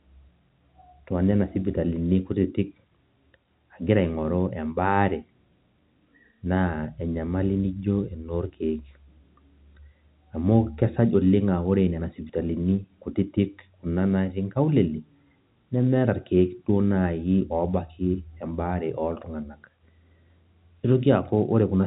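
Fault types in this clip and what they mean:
There are no fault types in this clip to list or explain.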